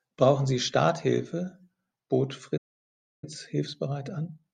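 A playback stall at 2.57 s cuts this speech recording off mid-flow, leaving about 0.65 s of silence until 3.24 s, most likely because the player ran out of buffered data or its output thread was held up before recovering. Time-compressed catch-up follows from 3.24 s to the end, where the speech runs about 1.1 times faster at unchanged pitch as the player trims and cross-fades small slices to clear its backlog.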